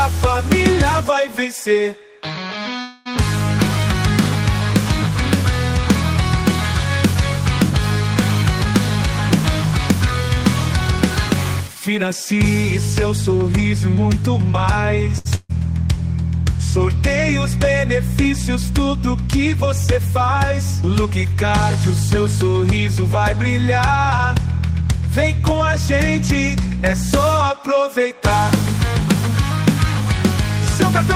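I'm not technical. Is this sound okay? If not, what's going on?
No. From 2.81 to 3.08 s the sound stops moving forward for about a quarter of a second and the last bit is stretched out as a fading buzz or hiss. This is likely a call audio freeze: delayed network data left the receiver nothing to play, so it filled the wait, then carried on where it left off.

From 15.18 to 15.27 s there is a short stall from a late packet. One piece of audio arrived late, so the previous sound is held for about 70 ms with a slight buzz or dip. Then playback resumes with nothing lost.

Right after, from 15.35 to 15.51 s, a burst of packet loss drops about 140 ms of audio. The receiver briefly extends the last sound and fades it out, ending in a tiny silence, then jumps ahead. That stretch of the sound is gone.

Three stretches play faster with the pitch unchanged: 11.32 to 12.64 s (about 4% fast), 19.67 to 20.52 s (about 7% fast), and 24.18 to 27.64 s (about 4% fast). 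This is jitter buffer speed-up. After a backlog built up, the receiver trimmed many tiny slices to catch up, which adds up to under a fifth of a second each time and makes the 7% passage sound hurried.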